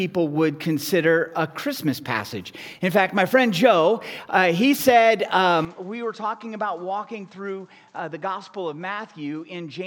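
Input switched to a poorer device at 5.65 s, likely, and it stays that way to the end. From that moment nothing reaches above 8.5 kHz, the level drops by roughly 10 dB, and a faint new noise floor appears. There is no silence at the switch, so the sound simply turns duller and quieter at once.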